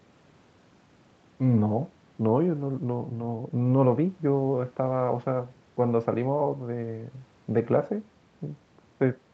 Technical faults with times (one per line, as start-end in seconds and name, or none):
none